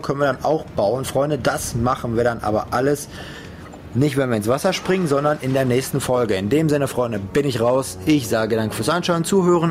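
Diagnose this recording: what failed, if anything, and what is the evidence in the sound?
Gain pumping runs through the whole recording: the gain swings by around 10 dB, and loud and quiet passages sit squashed close together. The likely cause is input gain set far too high at the microphone stage, with a fast limiter or compressor hauling it down on each peak. A noise gate would do the opposite, cutting the background in the gaps instead of lifting it.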